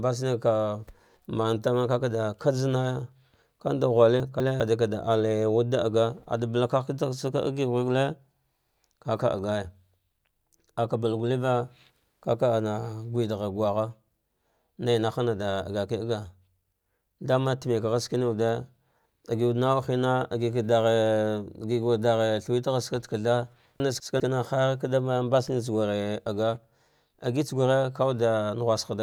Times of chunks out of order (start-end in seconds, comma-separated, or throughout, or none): 4.20-4.60, 23.80-24.20